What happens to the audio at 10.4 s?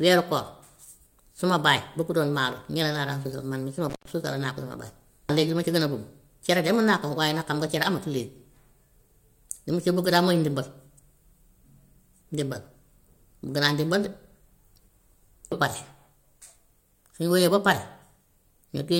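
Nothing goes wrong at 10.4 s; the speech continues intact through that moment, with no dropout, click or distortion.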